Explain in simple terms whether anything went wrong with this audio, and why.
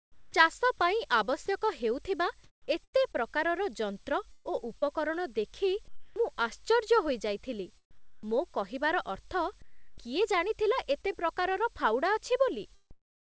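Sound chopped by the voice detector, from the start to 6.16 s: the sound keeps cutting in and out, with about 1.1 s in total replaced by a smooth hiss. This is likely because the sending side's voice detector kept deciding the speech had stopped, so quiet parts were dropped and filled with artificial noise.

Comfort noise in place of the background, from 7.91 to 11.13 s and again from 12.91 s to the end: the real room sound gives way to a flat, even hiss, about 0.7 s of it in the first stretch, and at the end the background also drops noticeably quieter. The likely cause is the sender pausing transmission when it hears no speech, so the receiver fills the gap with made-up noise.

Short concealed packet loss, at 11.02 to 11.13 s, just before "ପ୍ରକାରର ଫାଉଡ଼ା": a tiny piece of audio, about 20 ms, never arrived in time. The receiver patched the hole by stretching the preceding sound, which leaves a brief smear or wobble. 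The call connection itself carries nothing above 8 kHz, so the speech sounds a little dull throughout.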